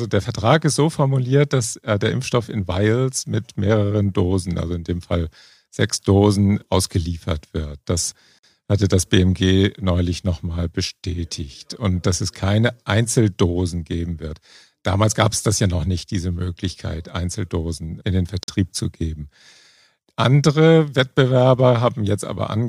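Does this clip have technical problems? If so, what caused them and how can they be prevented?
Yes. Two gaps between chunks interrupt the speech, from 8.39 to 8.43 s just before "hatte das", and from 18.43 to 18.48 s between "in den" and "zu geben". Each is a 48 ms hole, about 10 s apart, which fits audio handled in 10-second chunks with silence inserted at each join. Unlike a dropout, nothing is lost: the speech picks up intact after each hole. Gapless chunk joining, with codec padding trimmed and each chunk scheduled back to back, prevents this.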